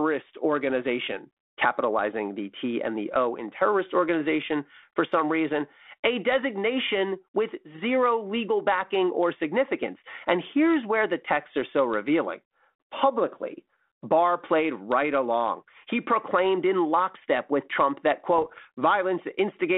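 This speech clip, carried over a G.726 ADPCM link at 32 kbit/s on a telephone line whose band runs roughly 250 Hz to 3.6 kHz, suffers bit errors on the ADPCM link from 18.36 to 18.63 s. A small share of bits, around three in a thousand, were flipped in transit. Each corrupted value knocks the decoder's step size and predictor off track, so the damage rings on for milliseconds afterwards, heard as pops and rough bursts with brief jumps in level.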